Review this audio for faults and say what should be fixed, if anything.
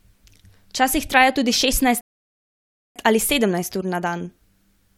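At 2.01 s the speech cuts to silence and stays silent until 2.96 s, then picks up with "ali sedemnajst ur". This is a rebuffering stall: playback ran through its downloaded audio and waited about 0.95 s for more to arrive. Unlike a dropout or lost packet, nothing is missing. The speech resumes exactly where it halted, so only time is added. Preventing it means buffering further ahead or adapting to a lower bitrate when throughput falls.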